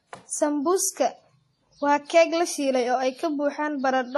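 Throughout, the speech has nothing above 13 kHz, an empty band on a spectrogram, with layered artefacts, likely from transcoding between lossy codecs, AAC then WMA.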